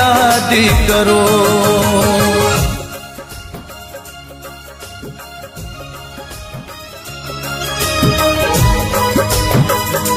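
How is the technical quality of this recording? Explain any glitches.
There's one real glitch, a stretch of zipper noise from about 6.97 to 7.99 s. Over that second the level shifts by something like 15 dB, but it moves in hard 3 dB jumps, roughly five a second, with no smoothing between them. Each jump is a small discontinuity in the waveform, so you hear a quick ticking, almost a zipper sound, riding on top of the audio while the level moves.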